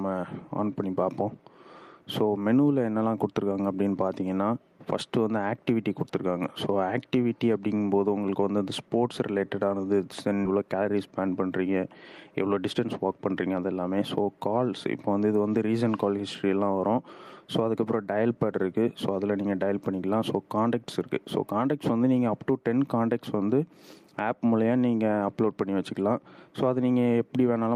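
At 10.45 s a skip ahead occurs: about a second of audio was discarded while later material was already queued, so playback jumps straight forward. On a waveform the envelope changes abruptly with no silent gap, and the spectrogram shows an instant, unbridged change of content.

Jitter buffer speed-up follows from 10.55 to 11.28 s at 113% and from 12.42 to 13.19 s at 111%. Each time the receiver trimmed roughly a tenth of a second in small pitch-period pieces, so the audio sounds hurried at unchanged pitch. A spectrogram shows compressed timing with harmonics at the same frequencies.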